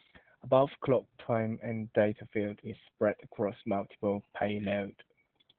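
Throughout the speech, Opus voice compression is heavy. Nothing is left above about 4.6 kHz, a narrowband result from the SILK coder. Its coarse excitation makes the voice muffled, hoarse and slightly robotic. That fits a bitrate near 8 kbps.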